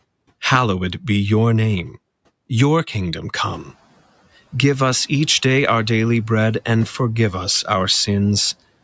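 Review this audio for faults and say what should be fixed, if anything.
From 3.38 to 3.69 s the background noise comes through less reduced, then sinks by about 8 dB. This is the noise suppressor catching up: the room noise rose about 12 dB around three and a half seconds, and its noise estimate needed 310 ms to adapt. A suppressor whose noise estimate tracks sudden rises faster would prevent this.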